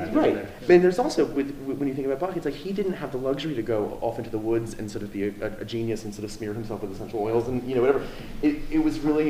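Nothing technical goes wrong anywhere in the recording, so there's nothing to flag here.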